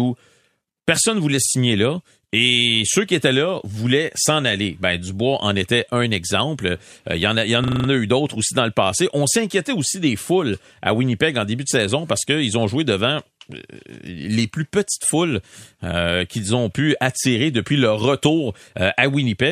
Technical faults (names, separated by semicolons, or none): system hang loop